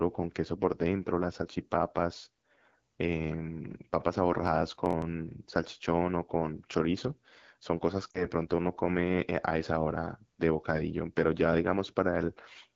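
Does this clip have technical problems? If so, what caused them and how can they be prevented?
Yes. There are three faults.

The whole clip carries AMR wideband (HD Voice) codec damage. The speech sounds rough and raspy throughout. The codec models only up to 6.4 kHz and fills the top band with shaped noise. This plainly audible roughness fits the low 8.85 kbit/s mode. To prevent it, run the link at 12.65 kbit/s or higher.

From 4.47 to 5.02 s there is processor overload crackle. The processor missed a handful of very short audio deadlines in a row. Each buffer lasted around a millisecond or two and was skipped outright. Each skip left a tiny hard-edged gap, and together they sound like a gritty crackle. To prevent it, use larger buffers or reduce the processing load.

From 8.11 to 8.24 s there are lost AMR speech frames. About 40 ms of speech failed to arrive intact, which fits two lost 20 ms frames. 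The decoder reused its last good settings at falling gain. The result is a brief drop to near silence. To prevent it, improve radio coverage or use stronger error protection.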